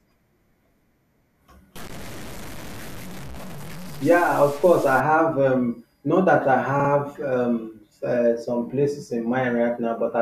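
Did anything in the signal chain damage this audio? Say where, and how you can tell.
Yes. Low bit depth without dither runs from 1.76 s to 5.00 s, ending just before "have um not that". The speech turns grainy, with distortion that tracks the voice and is most noticeable on quieter syllables. The error sits roughly 20 dB below the signal, which fits a reduction to about 6 bits by plain truncation with no dither. The likely stage is a sample-format conversion: rounding errors follow the waveform instead of forming a steady hiss.

Repeated frames occur at 6.79 to 6.89 s, just before "um uh some places". A short stretch plays again, producing a stutter. The added time is 96 ms, which fits two 48 ms compressed frames replayed. This places the damage after encoding, in storage or network transport, where a run of frames was written or delivered twice and decoded faithfully.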